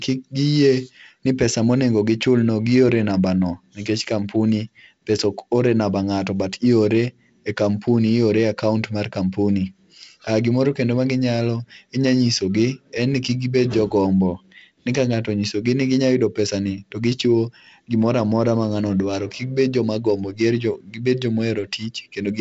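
Nothing faulty can be heard in this speech recording.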